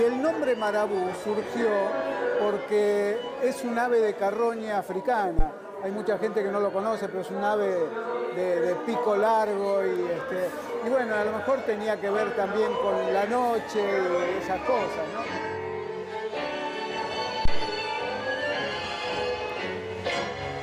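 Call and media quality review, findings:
Bit error spike: single flipped bits on digital link or memory, sample values jumping by a power of two. Sharp broadband ticks at 0.67, 9.96, 19.50 s, about -23 to -29 dBFS.

Phantom power thump: supply switched on or off on a live input, step passing through coupling capacitors. Deep low thumps at 5.39 s (12 ms decay) and 17.45 s (54 ms decay, ends 17.69 s).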